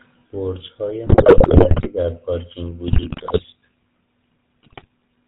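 A buzzy, gravelly roughness runs through the whole speech, with nothing above 4 kHz. That is the GSM full-rate codec: a vocal-tract model driven by coarse, regularly spaced pulses, which fits the 13 kbps full-rate coder.

From 1.06 to 1.90 s, 2.88 to 3.45 s and 4.62 to 4.86 s the voice breaks into squawks, pops and gargling. These are GSM bit errors: corrupted filter, pitch and gain values warp the spectrum and level frame by frame, worst in the first burst.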